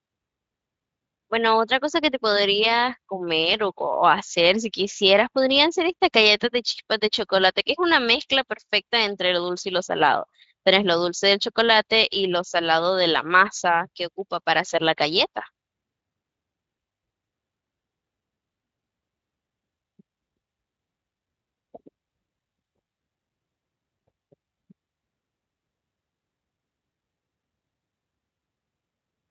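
No faults stand out anywhere in this speech clip. It has passed through the Speex codec, which leaves only a light trace here, and the sound carries nothing above about 7.5 kHz.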